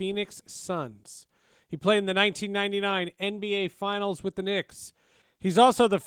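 Nothing in this speech recording stood out as a technical problem on listening.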